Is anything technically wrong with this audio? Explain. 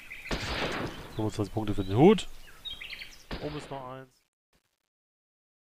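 Yes. From 3.07 s to the end at 5.79 s, the fade-out shows truncation distortion. The fade itself starts around 3 s, but the gain stage keeps too few bits without dither, which fits a 10-bit path. Quiet samples collapse into coarse square steps. From 3.59 s the tail turns gritty. A noise gate chatters at a threshold; this grit instead worsens steadily as level drops.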